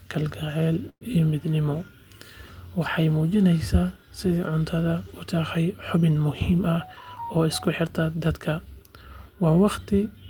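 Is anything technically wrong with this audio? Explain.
Yes, there are two faults in this speech clip.

At 0.89 s to 1.03 s there is a call audio freeze. The speech stops, and the last sound is stretched into a fading buzz that drops to silence for about 70 ms. Speech then resumes exactly where it left off, so nothing is lost. The likely cause is packets arriving late enough for the jitter buffer to run dry. The receiver filled about 116 ms, and the rest of the clip now plays that much later.

From 7.21 s to 8.41 s there is a jitter buffer speed-up. The speech runs at about 108% of normal speed with its pitch unchanged, so it sounds hurried. The receiver had more audio buffered than it wanted, probably including the delay added by the earlier freeze. To cut that back, it removed many short pitch-period slices, about a tenth of a second in total over that stretch.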